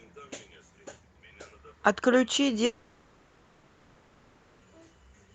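From 2.65 s to 4.63 s the speech gives way to a long network dropout, likely caused by the stream stalling for nearly two seconds. The receiver fills the whole gap with synthesised continuation, a smeared buzz and hiss drawn from the last sound, so nothing goes fully silent. On a spectrogram the harmonics stop being articulated and blur into a fading smear; the waveform's envelope sags into a low, featureless band until speech resumes with the lost part missing. Across the clip, content stops at about 8 kHz, which fits the call codec's bandwidth setting.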